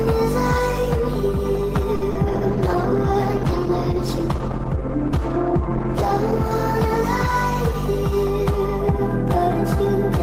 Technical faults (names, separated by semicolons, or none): short stall from a late packet; short concealed packet loss; call bitrate drop